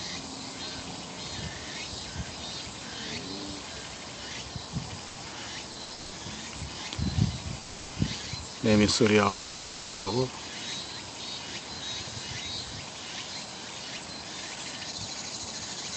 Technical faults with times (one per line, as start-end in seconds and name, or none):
5.07-5.18 short stall from a late packet
5.72-5.92 short stall from a late packet
5.94-6.14 call audio freeze
7.62-7.92 call audio freeze
9.28-10.08 call audio freeze
14.24-15.77 jitter buffer speed-up